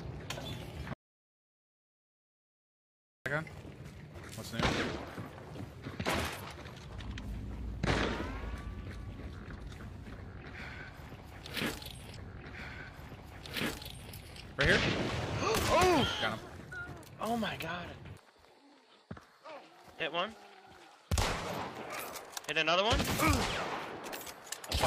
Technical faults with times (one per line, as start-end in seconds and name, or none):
0.93-3.26 audio dropout to silence
12.12-14.12 stream segment repeated